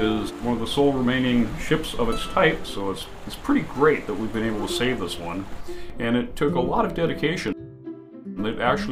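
Clock drift buffer slips run from 0.32 s to 8.91 s: a click or pop recurs at a steady interval of about 1.43 s, roughly seven times. The likely cause is two devices running on separate clocks that disagree by around 150 parts per million, so the buffer between them slowly drifts toward overflow or underflow. Each time it runs out of room, a handful of samples is dropped or repeated, and that tiny discontinuity is the click.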